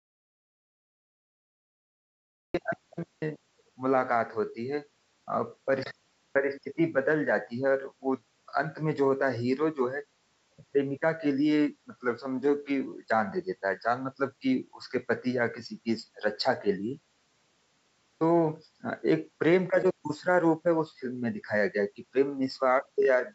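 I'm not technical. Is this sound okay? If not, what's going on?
No. The audio input was likely lost for a moment, through a disconnected microphone or a brief mute, while recording carried on. This is an audio dropout to silence: the clip opens in total dead silence, with no background hiss, until about 2.54 s, when the speech suddenly starts.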